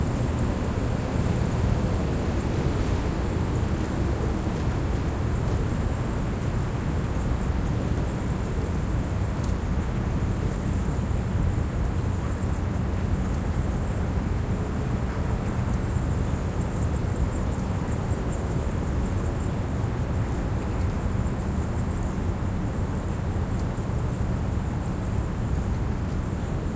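The clip is a recording of sounds, and nothing is technically wrong with it.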